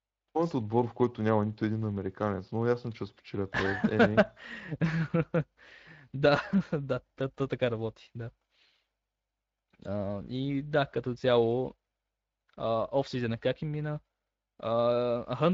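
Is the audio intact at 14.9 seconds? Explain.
No, not really. At 14.9 seconds you're still hearing the Speex codec damage that runs through the whole clip. Speex is a CELP coder: it models the vocal tract with a filter and spends its limited bits on the excitation signal feeding it. The plainly audible roughness suggests a rate of around 20 kbps, which leaves the excitation coarse, so the speech comes out grainy and hoarse instead of clean.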